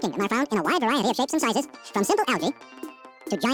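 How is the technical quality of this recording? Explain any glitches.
The technical quality is poor, because one fault runs through the entire recording: the audio is read two samples at a time, so it plays at double speed. From start to finish everything moves at 2.0 times its proper rate and sits an octave high. The reader has taken consecutive sample pairs as single frames, as if the data were two channels or double-width samples, so every second of material is crammed into half a second. That pairing also lets any strong content above a quarter of the sample rate fold back.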